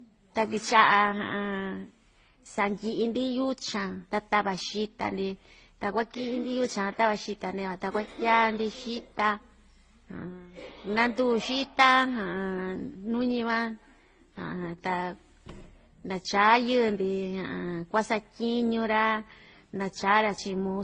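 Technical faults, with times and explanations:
Throughout, transcoding between lossy codecs: the speech was likely passed through several lossy encoders in turn, consistent with a low-rate HE-AAC stage, then MP3, then Opus at modest bitrates. Each later encoder spent its limited bits re-coding the earlier one's artefacts while adding its own, so the different artefacts are heard together. The lowest cut-off in the chain persists, leaving nothing above 9.6 kHz and a dull, closed-in top end.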